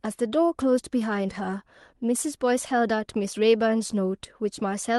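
No technical faults occur anywhere in the speech, so there is nothing to describe in time order.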